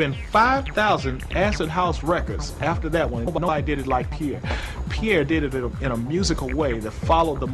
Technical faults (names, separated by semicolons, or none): frames out of order